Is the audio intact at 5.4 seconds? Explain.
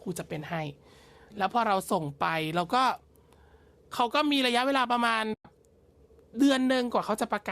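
No. AAC frame loss with muting leaves a gap from 5.34 to 5.45 s: the decoder zeroes the lost 110 ms, and overlapping windows fade it in and out, unlike an abrupt hard cut.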